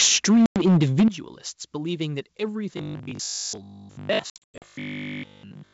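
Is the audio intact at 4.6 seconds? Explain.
No. At 4.6 seconds the audio falls inside a burst of packet loss on an ADPCM call, running from 4.30 to 4.66 s. About 240 ms of audio drops out across roughly 320 ms, in gaps up to 100 ms long, each filled with hard-edged silence. Because the receiver's adaptive predictor and step size lose step with the sender's, speech resumes with some distortion, then settles within tens of milliseconds.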